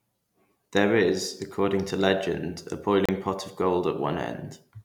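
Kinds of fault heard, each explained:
Digital broadcast dropout: the speech cuts to silence for a brief hole from 3.06 to 3.09 s, then resumes. The receiver muted after losing the signal or rejecting a corrupted frame, which fits a single lost frame of about 32 ms.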